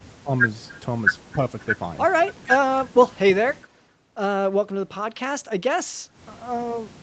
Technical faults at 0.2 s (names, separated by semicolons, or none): speech suppressed in double talk